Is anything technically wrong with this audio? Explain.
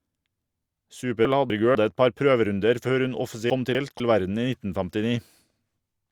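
Yes. Chunks out of order at 1.25–1.75 s, just before "et par prøverunder før", and at 3.5–4.0 s, after "par prøverunder før hun". In each, one 250 ms chunk arrives late and plays after its successor. The speech briefly jumbles, with three hard joins.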